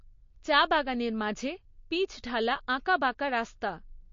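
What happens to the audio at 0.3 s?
At 0.3 s the speech carries the same damage heard across the whole clip, most likely from MP3 compression. Nothing sounds above about 7.2 kHz, and the remaining detail has a watery, swirling quality, especially on s sounds, because weak frequency lines drop in and out from frame to frame. That pattern fits a bitrate around 34 kbps. A plain low-pass filter would dull the top in the same way but leave no swirl or metallic chirping.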